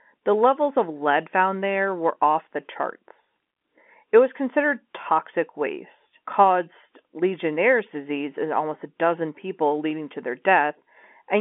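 Nothing's wrong with this bit of speech; it just carries the usual G.711 telephone coding, so the sound sits in the roughly 250 to 3400 Hz line band with nothing above about 3.7 kHz.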